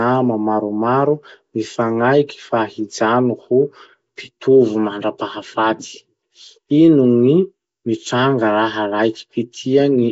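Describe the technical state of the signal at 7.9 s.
At 7.9 s the speech carries the same damage heard across the whole clip: a rough, hissy halo and a smeared, underwater quality, with nothing above 7.7 kHz. This is likely Nellymoser compression, whose coarse block coding fills starved bands with noise, which fits a low rate around 32 kbps.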